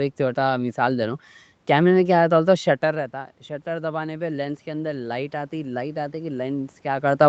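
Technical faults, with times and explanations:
2.55–7.14 s, automatic gain rising: after "میں کیا ہوتا ہوتا" the voice drops by about 11 dB as the talker moves back, and the gain control slowly adds about 6 dB. Unlike a talker simply returning closer, the room noise swells along with the voice.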